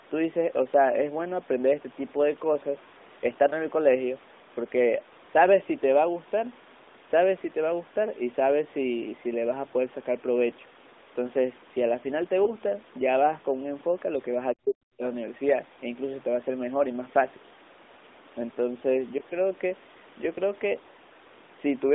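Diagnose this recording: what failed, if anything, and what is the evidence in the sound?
Lost AMR speech frames at 12.44 to 12.53 s, a network-side fault heard through the codec: the speech briefly dips and warbles, which fits a single lost 20 ms frame. The decoder filled the gap by reusing the last good pitch and vocal tract settings at reduced gain.

Speech suppressed in double talk, 14.54 to 15.07 s, in the call processing stage: the speech falls by as much as about 40 dB and breaks up for roughly half a second. The likely cause is an echo canceller that could not separate near-end speech from loudspeaker echo and turned both down.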